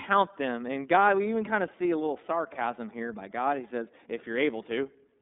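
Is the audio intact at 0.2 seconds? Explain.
No, not really. At 0.2 s you're already hearing the iLBC codec, and it runs the whole clip. Nothing makes it past about 3.8 kHz, and the lows thin out below roughly 250 Hz, so the speech has that boxed-in phone-line sound. Because each frame gets coded on its own, the voice comes out clearly roughened and a bit synthetic, which fits the 30 ms, 13.33 kbps mode.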